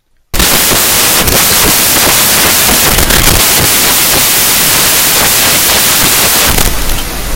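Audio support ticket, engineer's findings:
Loud broadband hiss from 0.34 s to the end. Samples built from the wrong bytes. Probable component: PCM reader or decoder. Byte order swapped or offset by one byte. Low-order bits land in the high positions.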